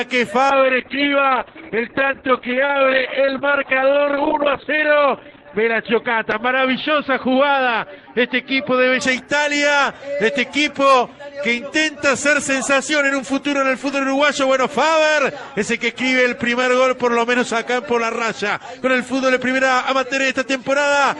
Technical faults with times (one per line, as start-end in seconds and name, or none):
0.54-9.07 call bitrate drop